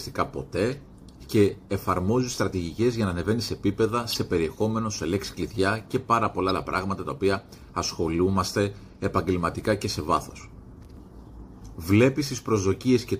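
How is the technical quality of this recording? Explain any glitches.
There is one glitch. A corrupt frame was decoded between 4.12 and 4.15 s. It lasts only about 24 ms, roughly a couple of frames. Some bits inside the compressed data were damaged. The decoder played those frames anyway. Misread gains and codes placed energy at the wrong frequencies for the length of the damaged frames. The result is a short chirp, squeak, blip or burst of noise, peaking at about -15 dBFS.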